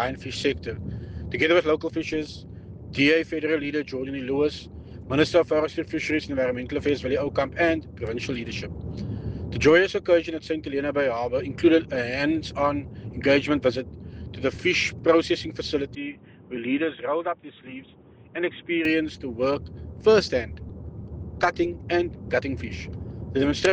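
The recording input likely switched to a poorer device from 15.95 to 18.85 s, so the audio loses everything above 3.8 kHz and turns dull and boxy, drops about 5 dB in level, and gains a faint new background noise, with no gap at the switch.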